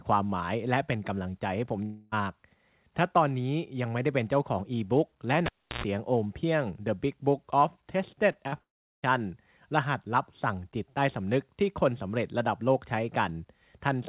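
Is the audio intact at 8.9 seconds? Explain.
No, 8.9 s sits inside a gap from 8.61 to 9.04 s, likely a long network dropout: the sound smears into a fading buzz, then silence, and resumes with a piece missing.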